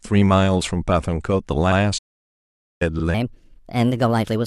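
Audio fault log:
1.71–1.77 s and 2.99–3.03 s, repeated frames: A short run of compressed frames was delivered twice, so the decoder plays the same slice again. The first repeat replays a 64 ms block and the second a 42.7 ms block, each heard once more. Each is a brief stutter. Together they lengthen the audio by about 107 ms.
1.98–2.82 s, playback stall: The player likely ran short of data or had its output thread held up, and nothing was written to the output until it caught up. The sound cuts off in mid-flow and leaves about 0.83 s of silence, long enough to register as a hard dropout rather than a pause in the speech. The sound then resumes at 2.82 s.
3.14 s to the end, section at the wrong speed: From this point the playback rate is 1.28 times too fast, likely because this stretch was handed to a mismatched clock. Speed and pitch rise together at once, so the speech turns hurried and about four semitones higher. 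It stays that way to the end of the clip. The jump from the correct rate is abrupt.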